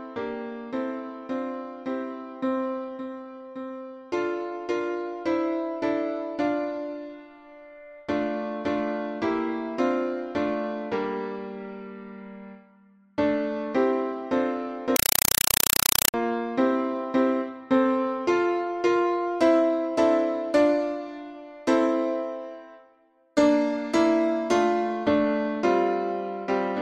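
A compressed stream played as audio runs from 14.96 to 16.14 s: an encoded Dolby Digital (AC-3) signal was passed straight to the output as if it were ordinary samples. Each encoded frame comes out as a 4 ms blast of noise followed by silence, repeating 31.25 times a second, so the sound is replaced by a harsh, very loud chattering static. The burst density fits a stream of around 192 kbps.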